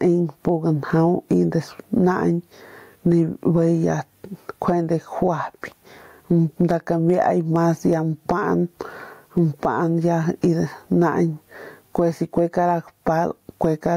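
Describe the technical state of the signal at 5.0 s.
At 5.0 s, as throughout the speech, gain pumping pulls the level down on every loud sound and squashes the speech, a swing of around 15 dB, likely from overdriven gain hitting a fast limiter. Unlike a noise gate, it does not cut quiet parts out.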